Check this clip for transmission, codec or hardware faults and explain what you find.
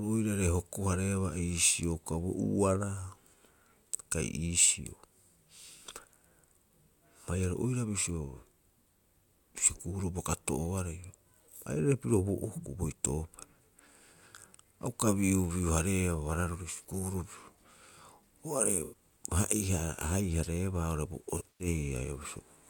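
There's AAC frame loss with concealment in two places. Around 18.84 s about 85 ms goes missing, and from 21.38 to 21.67 s about 149 ms drops out in patches over roughly 210 ms, the longest run around a tenth of a second. The decoder patches each gap from the last good spectrum with shuffled signs or interpolated energy, so the speech goes briefly smeared and phasey, with a hazy, noisy texture where the real signal should be.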